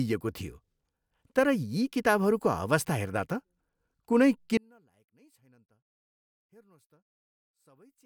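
From 4.57 s to the end at 8.06 s, the speech drops by about 36 dB to a faint residue. The likely cause is one channel inverted, cancelling the centred signal in mono. The waveform shrinks to a sliver and the spectrogram nearly empties.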